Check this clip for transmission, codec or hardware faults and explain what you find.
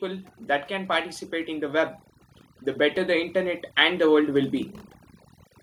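Two faults are audible: overdone noise removal across the whole recording, and automatic gain rising partway through.

The overdone noise removal runs from start to finish. A noise reduction stage set far too aggressively pulls individual frequency bands down to almost nothing wherever they sit close to its noise estimate, taking the softer parts of the speech with them. The gaps between phrases fall to near silence dotted with twinkling specks. On a spectrogram the background shows as scattered isolated dots on a dark field, with speech harmonics looking ragged and broken at their quieter edges.

Automatic gain rising occurs from 2.76 to 4.58 s. The gain control judged the input too quiet and raised its gain gradually, by about 4 dB over nearly two seconds. Voice and whatever background remains swell together rather than the speech alone getting louder, so the lift sounds like a slow push on the whole signal. 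In a waveform the envelope grows steadily across that span, and a spectrogram brightens evenly at all frequencies there.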